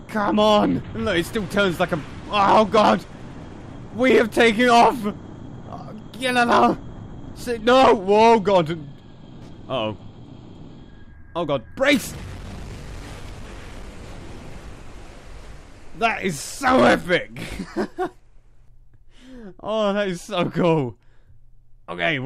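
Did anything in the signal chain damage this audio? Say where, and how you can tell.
Yes: a dropped buffer (overrun) at 2.77 s, a jump where the sound skips about 20 ms ahead, likely from the driver buffer being overwritten before it was read.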